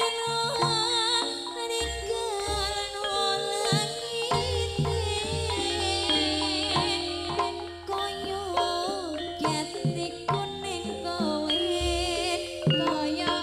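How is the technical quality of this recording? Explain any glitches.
One glitch stands out: a doubled audio track from 4.34 s to 8.10 s. Across that span a second, full-band copy of the sound runs about half a second behind the original, about 10 dB quieter. It is likely caused by the sound being captured again through a slower path or by an edit that left two copies out of step. The copy carries no decay or room colour, so it sounds like a clean, distinct repeat rather than reverb, and it switches on and off abruptly at those boundaries. On a spectrogram, every pattern appears twice, with a dimmer duplicate shifted about 0.5 s to the right. The waveform shows overlapping, displaced envelopes that begin and end sharply.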